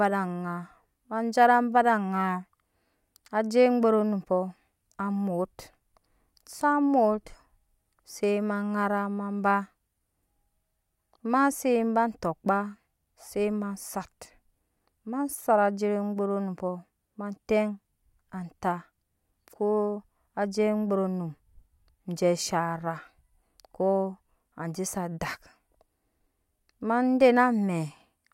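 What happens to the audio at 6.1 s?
At 6.1 s the speech carries on cleanly, with no dropout, click, distortion or other fault at that point.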